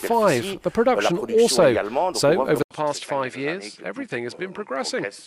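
At 2.63 s the audio drops out for about 80 ms, then returns duller and a little quieter, with nothing above 11.4 kHz and a faint new background noise floor. This points to an input switched to a poorer device, likely another microphone, for the rest of the clip.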